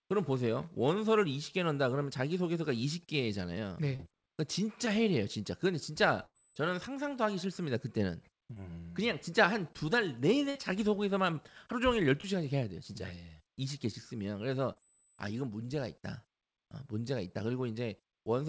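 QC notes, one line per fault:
3.96–4.01 s, 4.85–4.88 s, 8.54–8.58 s, 12.21–12.25 s, 14.73–14.78 s: short concealed packet loss. Each time, 20 to 40 ms went missing. The decoder extended the preceding sound to cover it, leaving a brief smear or wobble.
6.26–6.36 s and 10.50–10.57 s: burst of packet loss. About 80 ms and 60 ms were lost. The decoder held the last sound as it faded, and then the audio skipped ahead. Both events sit within the call codec's band, which has nothing above 8 kHz.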